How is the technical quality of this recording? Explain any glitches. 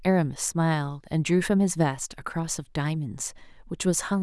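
No technical glitches can be heard anywhere in the recording of speech; the signal stays steady and intact throughout.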